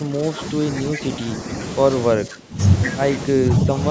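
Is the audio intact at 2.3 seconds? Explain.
No. From 2.16 to 2.59 s, the speech sinks by roughly 15 dB. This is speech suppressed in double talk. Both sides likely spoke at once, and the echo canceller, unable to separate them, turned this talker down too.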